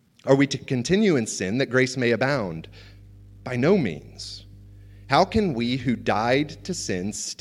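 Mains hum runs from 2.34 s to 7.16 s, entering just after "sin that grace may". Power-line current leaks into the signal through a ground loop or nearby transformer, laying a steady 50 Hz drone with low harmonics under the speech, roughly 25 dB below it.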